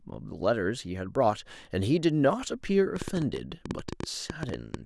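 A speech recording with a train of clicks running from 2.96 s to 4.75 s: around twenty sharp, similar pulses at about 9.5 per second, unevenly spaced, so the effect is an irregular ticking laid over the speech and audible in the gaps as well. The clicks peak roughly 10 dB above the speech level. The likely cause is electrical interference from nearby equipment or a faulty connection or power supply.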